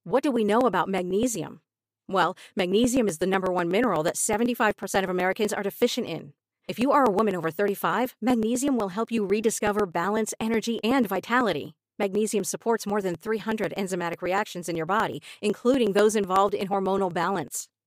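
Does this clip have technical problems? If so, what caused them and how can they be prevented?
Yes. Periodic USB or driver dropouts tick every 0.124 s from 0.12 to 17.73 s, each skipping about a millisecond of speech. Preventing it means stopping background tasks that stall the USB bus or audio driver.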